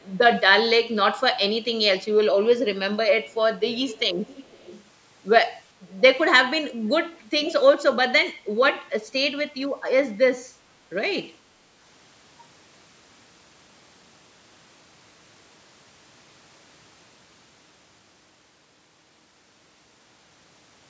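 At 0.0, 3.25, 3.72 to 4.83, 6.69 and 7.43 s, a delayed copy of the speech returns 405 to 467 ms late. It ranges from barely audible to fairly clear near 7.4 s. This echo leak likely comes from a loudspeaker's echo canceller passing residue. Unlike room reverberation, the copy repeats distinctly rather than smearing.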